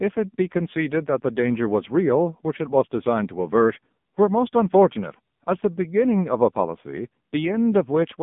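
From start to finish the speech carries the AMR narrowband mobile codec, heavily. The band runs only from about 150 Hz to 3.6 kHz, with nothing above 3.7 kHz, and the voice sounds buzzy and synthetic, which fits a low mode near 6.7 kbps. Each 20 ms frame rebuilds the voice from a vocal-tract model fed by sparse pulses. That coarse rebuilding, rather than the narrow band alone, separates it from simple telephone filtering, which would sound muffled but natural.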